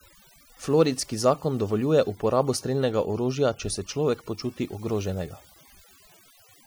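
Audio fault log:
Throughout: overdone noise removal. Noise reduction was applied far too hard, cutting individual frequency bands down or out whenever they came close to its noise estimate. The background drops and breaks up into twinkling specks, and the speech loses its quieter detail.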